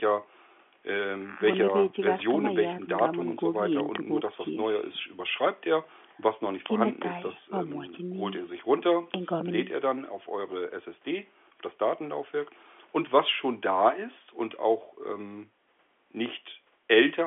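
The speech sits in the usual narrow band of G.711 telephone coding, with its content held between about 250 Hz and 3.4 kHz and nothing above 3.7 kHz, and no technical faults can be heard.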